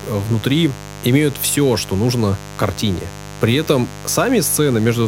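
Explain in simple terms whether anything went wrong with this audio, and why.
Electrical interference from the 50 Hz mains supply leaked into the recording as mains buzz, a steady, raspy hum sitting fairly loud under the speech throughout.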